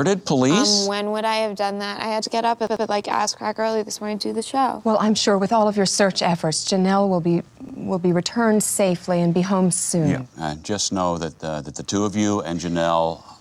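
The audio carries computer activity noise throughout: a buzzy pulse train at roughly 100 pulses per second, around 40 dB below the signal, caused by processor, graphics or mouse load disturbing the audio circuit's shared ground. A spectrogram shows evenly spaced vertical striations that follow the computer's activity, not the sound. There are also two repeated-frames stutters. From 2.67 to 2.86 s, a 92.9 ms block plays twice more, adding 185.8 ms. From 7.69 to 7.78 s, the same length of block repeats once, adding 92.9 ms. Each block length fits a single compressed frame being re-sent. On the waveform these look like identical copies of the same short segment placed back to back.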